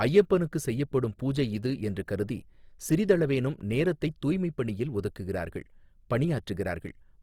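Opus compression runs throughout the speech, and it is likely the cause of the plainly audible damage. Starved of bits, the music mode keeps each band's energy but fills detail with folded or noise content, turning the sound grainy and rough. The damage fits roughly 24 kbps.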